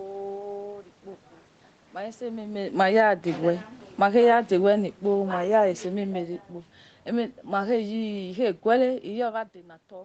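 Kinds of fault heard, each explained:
Automatic gain falling: the gain control judged the input too loud or its background noise too strong and pulled gain down, so speech and room noise sink together by about 3 to 6 dB, at 2.64, 3.86, 5.04 and 7.08 s.
Automatic gain rising: the gain control judged the input too quiet and lifted gain by about 6 dB from 3.01 to 3.51 s, so speech and background swell together.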